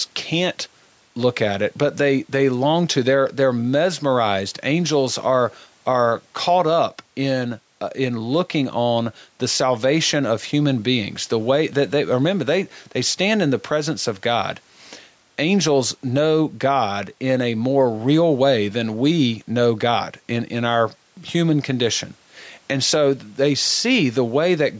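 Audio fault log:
Throughout, gain pumping: loud and soft parts are pulled closer in level, a swing of about 5 dB, with the speech squashed flat, likely from a fast limiter reacting to excessive microphone gain. Unlike a noise gate, the room noise never cuts out.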